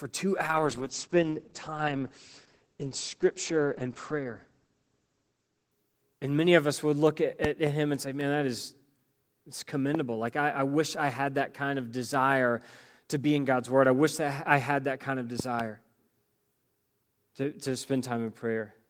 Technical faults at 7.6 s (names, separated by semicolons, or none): loud pop